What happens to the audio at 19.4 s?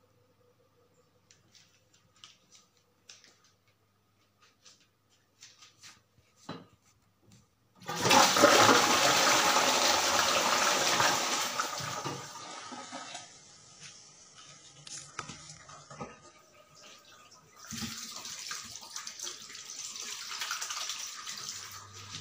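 Nothing goes wrong at 19.4 s; the audio plays through that moment intact, with no dropout, click, glitch or other fault.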